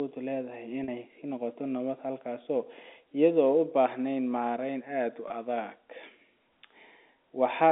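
At 0.84 s there's a 40 ms gap, about two packets' worth, and at 5.28 s a shorter 20 ms one, about one packet. Both are packet loss with pitch repetition: the receiver loops the last pitch period to cover the hole, so instead of a dropout you hear the sound briefly hang on a slightly buzzy, held tone before carrying on. The narrowband G.711 telephone coding around it is working as expected.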